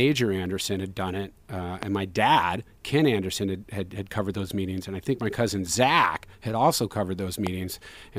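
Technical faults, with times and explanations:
1.83–1.85 s, loud pop: a voltage spike, likely from a switch or static, lands after "had done it uh", giving one sharp pop about 15 dB above the speech, which continues beneath.
7.47–7.49 s, loud pop: another brief electrical pulse enters after "had also covered", producing a single sharp pop around 10 dB above the ongoing speech.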